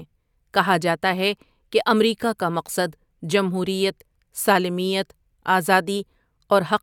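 Speech, with no technical faults to be heard anywhere in the recording. Nothing in the sound points to a problem in how it was captured, processed or played back.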